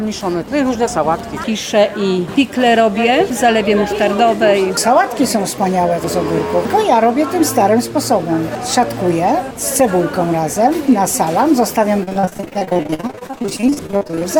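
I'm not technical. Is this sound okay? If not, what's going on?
No. From 12.03 to 14.23 s the sound turns choppy and robotic, with bits missing. This is repeated packet loss: dozens of short holes, none longer than 47 ms, are patched by stretching the preceding sound, covering nearly half that stretch.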